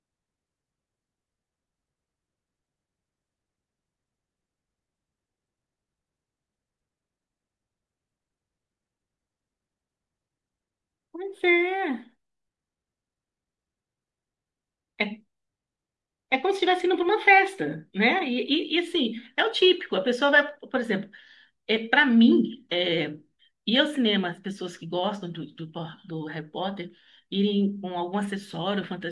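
No technical faults can be heard anywhere in the recording.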